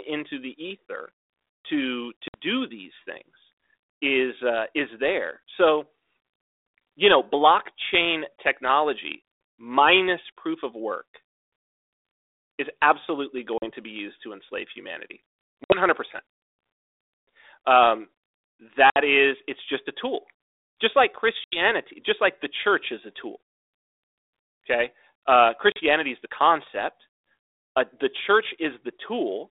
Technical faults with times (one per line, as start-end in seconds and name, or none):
2.28-2.38 packet loss on an ADPCM call
13.58-13.71 packet loss on an ADPCM call
15.64-15.80 packet loss on an ADPCM call
18.90-18.97 packet loss on an ADPCM call
21.44-21.59 packet loss on an ADPCM call
25.72-25.79 packet loss on an ADPCM call